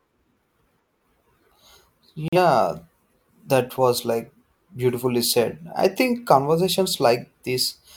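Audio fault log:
2.28–2.38 s digital broadcast dropout: speech cuts to silence for about 90 ms as the receiver mutes until good frames return, consistent with one lost frame.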